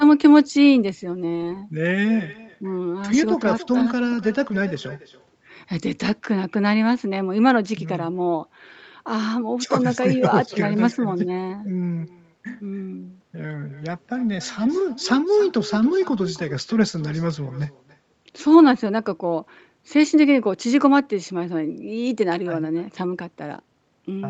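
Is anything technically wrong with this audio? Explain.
Yes. Throughout the speech there is echo with no canceller. The far end's loudspeaker feeds its microphone, returning a quieter copy about 18 dB down, roughly a third of a second late.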